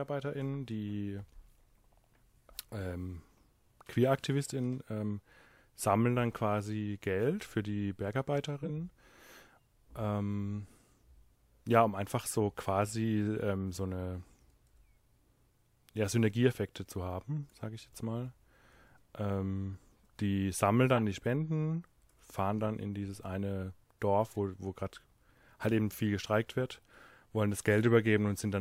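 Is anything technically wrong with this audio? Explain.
Yes, the speech contains corrupt frame decoded faults at 0.68 s, 8.63 to 8.70 s, 20.96 to 21.01 s and 24.33 to 24.36 s. In each case, damaged compressed frames were decoded anyway, so misread data put energy at the wrong frequencies. Each is a brief chirp or noise blip, loudest near 8.6 s and 21 s (about -20 dBFS) and faint at 0.68 s and 24.3 s.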